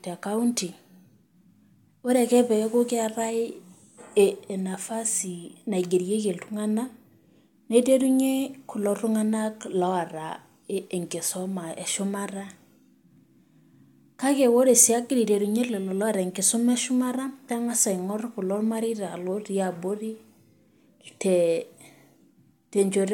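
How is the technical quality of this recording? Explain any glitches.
The recording's technical quality is good, and there are no glitches to explain.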